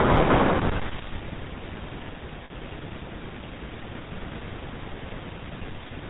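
GSM full-rate codec damage runs through the whole speech clip. The codec rebuilds each voice from a vocal-tract model excited by sparse, regular pulses, everything above 4 kHz is gone, and the voice takes on a plainly audible buzzy, gravelly roughness. The bitrate points to the 13 kbps full-rate mode.

Lost GSM frames occur from 2.44 to 2.51 s, a gap of about 60 ms. The decoder filled it by repeating the last good frame's settings, so the sound hangs there as a brief rough, metallic ring instead of a clean dropout.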